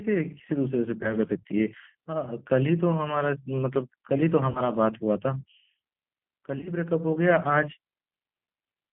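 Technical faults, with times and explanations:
Throughout: G.729 codec. The sound is held to a telephone band of about 150 Hz to 3.4 kHz, with nothing above. It carries the rough, slightly synthetic grain of a codec that rebuilds speech from a vocal tract filter, a pitch predictor and a few pulses per 10 ms frame, which points to G.729A at 8 kbit/s. The damage is plainly audible. Unlike simple band-limiting, the roughness sits inside the band itself.
1.03–1.14 s, 4.50–4.61 s and 6.58–6.72 s: VoIP packet loss concealed by the speech codec. About 10 ms is lost at 1.03 s, which fits a single frame, and about 50 ms at 4.50 s. At 6.58 s, 60 ms goes missing scattered over 80 ms, in runs no longer than 20 ms. Rather than going silent as a plain dropout would, the decoder stretches its last pitch and filter into a fading buzzy tone or coloured noise. Because each frame builds on the one before, the weakness lingers past the loss.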